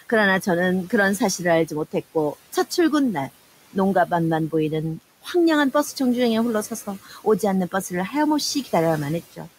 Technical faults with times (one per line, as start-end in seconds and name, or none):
0.00-9.58 noise suppressor artifacts
7.05-7.43 speech cut by the noise suppressor